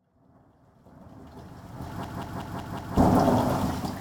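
After the clip's smooth fade-in, a system hang loop runs from 2.04 s to 2.97 s. The host or driver stalled while the audio hardware kept replaying its ring buffer, so one 185.76 ms slice of sound repeats exactly five times at 5.38 Hz, which fits an 8192-sample buffer. The result is a hard, machine-gun stutter rather than a steady buzz, and roughly a second of the original audio never plays.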